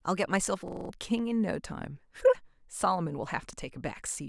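From 0.68 to 0.90 s a system hang loop interrupts the speech. The driver stalls while the hardware replays one 42.7 ms slice, fitting a 1024-sample ring buffer, five times at 23.4 Hz. The result is a rapid mechanical stutter, and roughly a fifth of a second of audio is lost.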